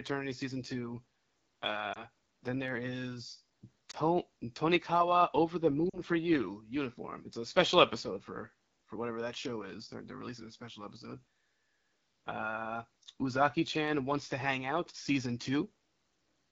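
From the start, the speech has the rough, raspy grain of the AMR wideband (HD Voice) codec. The roughness is plainly audible and fits one of its lowest modes, around 8.85 kbit/s. The codec models the voice with a pulse-driven vocal tract filter up to 6.4 kHz. It fills 6.4 to 7 kHz with shaped noise, so the top sounds hissy rather than detailed.

At 1.94 s, just before "then there is", a lost AMR speech frame causes a brief warble. That is one frame, about 20 ms. At 3.91 s, right after "then there is", a second single lost frame causes another short dip. At 5.89 s, between "over the" and "for you uniform it's", two frames drop, about 40 ms. Each time the decoder reused the last good pitch and vocal tract settings at falling gain. The sound dips toward silence, then returns rough.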